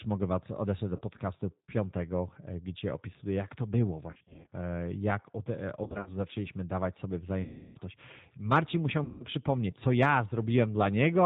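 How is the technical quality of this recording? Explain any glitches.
Quality is poor: the speech is plainly coloured by a low-bitrate telephone codec from start to finish, and five moments are marred by dropouts.

G.729 coding is plainly audible throughout. At 8 kbit/s the voice is rebuilt from a vocal tract filter, a pitch predictor and a few pulses per frame, so it sounds rough and faintly synthetic. Nothing passes above 4 kHz, which appears as a hard, flat ceiling on a spectrogram.

VoIP packet loss concealed by the speech codec occurs at 0.96–1.02 s (after "odesłać do"), 4.11–4.48 s (between "opisuję jak to było" and "e jak od e"), 5.84–6.12 s, 7.42–7.78 s (after "zaczęliśmy dawać sobie") and 9.04–9.26 s. With packets missing, the decoder repeats its last pitch and filter at falling gain, so the sound smears into a buzzy tone or coloured noise that fades. A waveform shows a smoothly decaying envelope, and a spectrogram shows a frozen spectrum. 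The events at 4.1 and 5.8 s break into several short stutters rather than one continuous smear.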